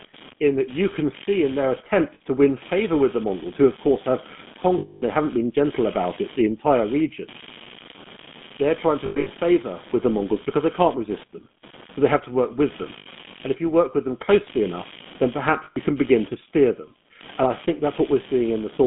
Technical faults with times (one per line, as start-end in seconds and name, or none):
0.00-18.87 computer activity noise
0.00-18.87 GSM full-rate codec
2.14-2.21 lost GSM frames
4.78-5.02 lost GSM frames
9.06-9.31 lost GSM frames
12.98-13.07 lost GSM frames
15.64-15.77 lost GSM frames